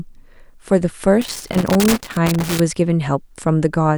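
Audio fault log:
1.22–2.60 s, loose connector crackle. For about 1.4 seconds the speech is broken by an irregular burst of crackle and scratching. A worn or dirty contact is shifting, making and breaking rapidly. Each break chops the signal, and the sudden reconnections give the rough, scratchy texture.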